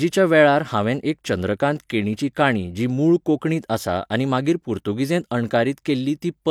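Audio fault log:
Nothing to flag here, as the speech comes through without any technical faults to log.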